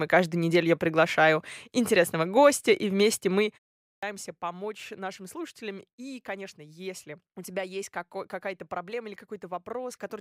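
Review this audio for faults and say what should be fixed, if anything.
Clipped start after a pause at 3.86 to 4.03 s: after "гостя и вместе мы" there is a short gap of about 0.36 s, and the output device appears to drop into a sleep state during that silence. When the sound resumes, the device needs time to wake and lock, so about 166 ms of the onset is swallowed and the phrase leading into "помочь нашим слушателям" begins abruptly, missing its first sounds. To prevent this, keep the output stream active through pauses, for example by disabling the device's idle power-saving or feeding it continuous low-level signal.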